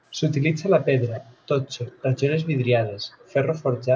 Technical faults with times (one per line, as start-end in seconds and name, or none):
0.85-1.21 echo leak
2.01-2.07 echo leak
3.02-3.33 echo leak